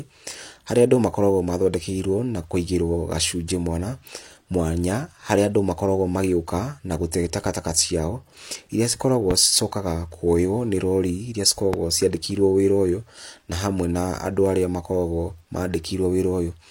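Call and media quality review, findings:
Loud pop, 9.31–9.33 s just after "takataka ciao iria cikoragwo", again 11.74–11.76 s: single sharp clicks standing well above the speech, which continues underneath. Likely a voltage transient from a connector, switch or static discharge, shaped by downstream circuitry into a brief pulse.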